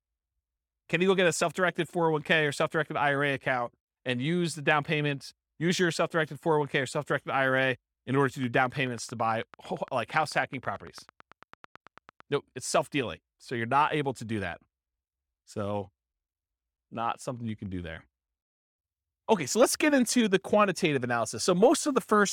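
Interference from nearby equipment or a faulty connection or power supply is the likely source of a train of clicks from 8.44 s to 12.21 s. Something injects a short pulse into the signal at a steady 9 per second, about forty in all, each with much the same shape. The result is an even ticking laid over the speech, peaking at about the speech's own level and still audible in the pauses between phrases.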